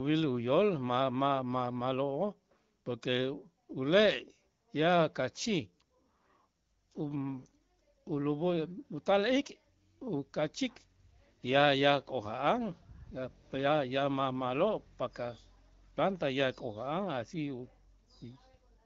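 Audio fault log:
No faults logged; the speech is carried by the AMR wideband (HD Voice) codec at 12.65 kbit/s, a rate at which it stays clear, with the slight coding texture and the top band near 7 kHz that this codec always produces.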